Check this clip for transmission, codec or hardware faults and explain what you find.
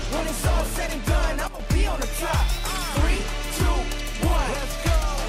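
One fault is present. Sudden gain jump, 1.48 to 1.60 s: the level drops by about 9 dB in a single step, holds there for roughly 0.12 s, then snaps back. Sound and background noise fall and recover together, most likely from a digital gain change applied without any ramp.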